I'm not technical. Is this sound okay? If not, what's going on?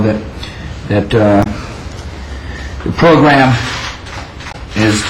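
No. There are two short glitches, at 1.40 to 1.47 s and at 4.48 to 4.55 s. Both come from damaged data in a compressed stream: the player hits scrambled bits, briefly loses its place and has to find it again.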